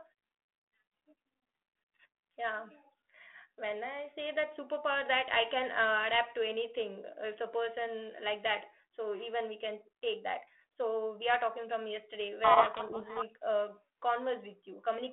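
Speech carried over a G.726 telephone path, whose 250 Hz to 3.4 kHz band and light coding grain fit 32 kbit/s, has a codec payload misread from 12.44 to 13.27 s. The decoder reads each code word with its bits in the wrong order, burying the speech in harsh distortion. On a spectrogram this appears as dense broadband smear replacing the harmonics, and on a waveform as a jagged, noise-like stretch.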